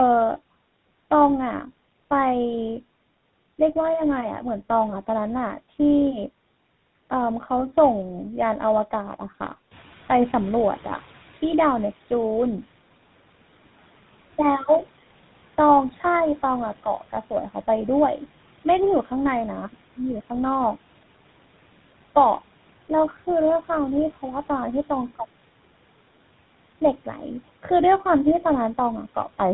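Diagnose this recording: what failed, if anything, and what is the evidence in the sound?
Tandem speech coding at the codec stage runs through the whole clip: the speech is band-limited to nothing above 3.9 kHz and sounds rough, muffled and warbly. This fits two speech codecs in a row, such as CVSD feeding GSM full rate via G.711 A-law, each later coder working on the previous one's degraded output. A single codec would sound cleaner.

At the call-processing stage, the noise suppressor is catching up from 9.71 to 11.95 s. The room noise jumps by about 11 dB around 9.5 s, passes through under-reduced, then sinks by about 10 dB over 2.24 s as the noise estimate adapts. A genuine change in the room would stay at its new level instead of fading.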